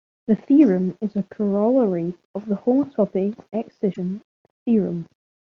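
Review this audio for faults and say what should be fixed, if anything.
Damaged data in a compressed stream between 3.90 and 3.99 s: corrupted bytes left the decoder unable to parse those frames, so it lost sync and hunted for the next valid header, producing a brief glitch that breaks into the speech. Protect the stream with checksums and error-resilient transport so corrupt frames are caught and concealed or resent.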